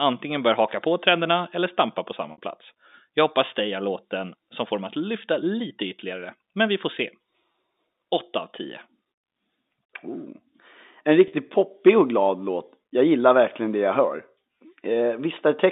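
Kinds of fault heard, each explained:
Packet loss with pitch repetition, at 2.32–2.38 s, 7.52 s and 11.28–11.32 s: stretches of speech went missing, 60, 20 and 40 ms long, and the receiver bridged each gap by repeating the last pitch period, heard as a brief held, buzzy tone, with the 60 ms gap fading into silence before the speech returns.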